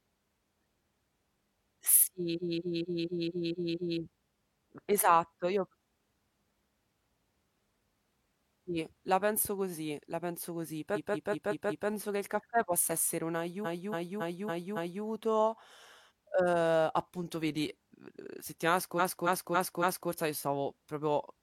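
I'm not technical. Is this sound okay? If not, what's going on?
No. In four places the speech stutters, jumping back to replay the same short slice over and over: 2.33 to 3.95 s, 10.92 to 11.85 s, 13.61 to 15.0 s, and 18.95 to 20.07 s. Each slice lasts roughly 0.19 to 0.28 seconds and plays four to seven extra times. These are repeated frames: chunks of compressed audio were stored or sent more than once, so the player plays them again, adding about one to 1.6 seconds each time.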